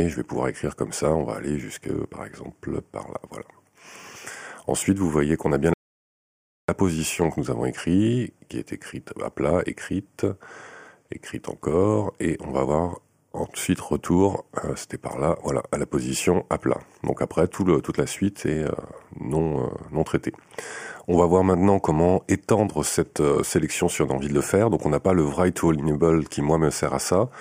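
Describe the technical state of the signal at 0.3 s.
At 0.3 s the signal is intact, with no technical fault present at that moment.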